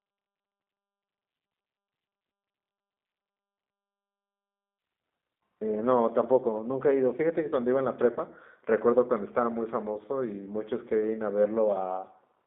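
From start to finish the sound carries the roughness of the G.729 codec, whose quality points to an 8 kbit/s setting. Speech is rebuilt from a filter plus a few pulses per frame, so it sounds slightly synthetic. On a spectrogram, energy sits between roughly 200 Hz and 3.6 kHz with nothing above.

At 8.13 to 8.19 s, VoIP packet loss concealed by the speech codec covers a 30 ms gap, fitting a single lost packet. The decoder extends its last pitch and filter, giving a brief stretched, fading sound. In the waveform this appears as a repetitive, decaying segment.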